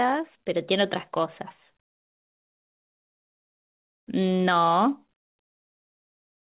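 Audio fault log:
Throughout: clock drift between sender and receiver. The sending side's audio clock runs roughly 3 percent slow against the receiver's, so the jitter buffer keeps running low and the receiver has to stretch what it has to avoid running dry. The result is a faintly unsteady pace across the whole clip, with small timing hiccups turning up at uneven intervals rather than on a regular beat, heard through the narrow call band that holds nothing above 4 kHz.
0.07 to 5.55 s: repeated timing corrections. To stay in step with the slow sender, the receiver repeatedly repeats short slices of audio, all in the same direction, adding something like 50 ms in total over this stretch. That plays this portion at about 99 percent of its proper speed. Each edit is tiny, so the effect is a slight drag and the occasional stutter in the rhythm rather than any obvious skip.
4.39 to 5.66 s: scattered short gaps. 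About four packets went missing or arrived too late in this window, the longest hole around 40 ms. The receiver covered each one by extending the sound just before it, filling something like 70 ms altogether, about a twentieth of the span. The audio stays intelligible but picks up brief smears and small ticks where the patched pieces join the real signal.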